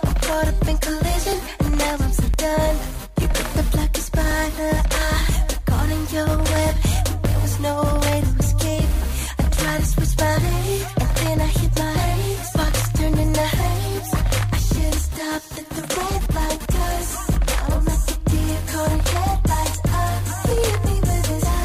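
Overlap between stream segments produces tiny clicks or skips at 2.34, 3.33, 6.27 and 7.25 s, where overlapping 1 s segment timestamps cause milliseconds of audio to be dropped.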